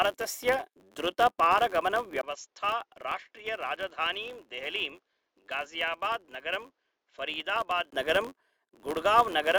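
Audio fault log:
throughout: filter restarted on every block. A filter drops its stored state at each block boundary, fitting a 512-sample buffer, and restarts from silence. The resulting tiny transient at every block start forms a buzz at 93.8 Hz that rises and falls with the speech level.
2.21–7.92 s: input switched to a poorer device. The recording likely moved to a lesser microphone or headset profile, opening with a 20 ms gap. The device passes a narrower band, so speech turns dull and boxy, drops about 5 dB, and gains background noise around 50 dB down.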